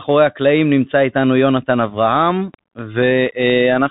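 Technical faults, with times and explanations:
Throughout, Bluetooth CVSD headset codec: the speech has that narrowband headset sound, with nothing getting through above about 4 kHz, which fits a 64 kbps CVSD link. The codec sends one bit per sample, just nudging the level up or down with an adapting step. Loud, bright bits can't be tracked fast enough, so they smear and distort. S sounds come out scratchy, and there's a grainy hiss sitting under the speech. The damage is plainly audible.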